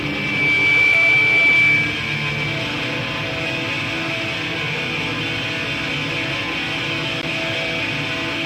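The output buffer was likely left unfilled twice, so short blocks of digital silence replaced the audio: 5 ms at 0.94 s and 15 ms at 7.22 s. Each cuts out abruptly with no fade, heard as a tick at 0.94 s and a brief hole at 7.22 s.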